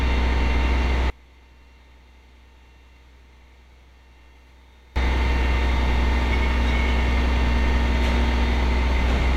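A short everyday-sound recording: from 1.10 to 4.96 s the summed level falls by about 29 dB, leaving a faint residue, likely one channel inverted, so shared content cancels in mono. Unlike a dropout, the sound never goes fully silent.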